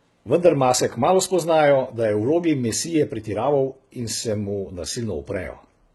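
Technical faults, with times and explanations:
Throughout, HE-AAC compression: the speech has a gritty, metallic top, s sounds turn lispy, and nothing reaches above 11.8 kHz. The damage is heavy and likely points to HE-AAC v2 near 16 kbps. Its treble is copied up from lower bands, so harmonics mismatch.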